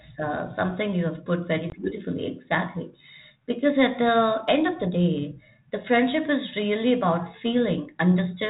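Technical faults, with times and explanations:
1.70 to 1.79 s, packet loss on an ADPCM call: about one packet's worth of the speech, 20 ms, drops out and is filled with silence, leaving a hard-edged hole. Because ADPCM only sends differences from a prediction, the decoder's predictor and step size lose track of the sender's during the gap, so the speech comes back slightly distorted until it resyncs by 1.79 s, under the light grain of the 32 kbit/s G.726 coding.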